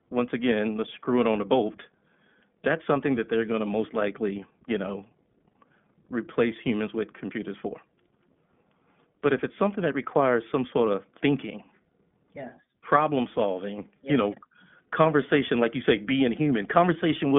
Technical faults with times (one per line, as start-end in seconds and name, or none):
0.00-17.39 iLBC codec